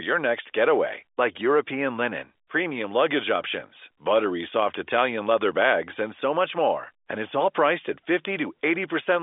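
No faults are present: the speech carries the normal G.711 telephone coding, band-limited to 250 Hz to 3.6 kHz as that line format should be.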